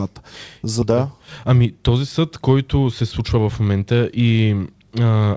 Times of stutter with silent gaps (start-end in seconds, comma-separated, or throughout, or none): none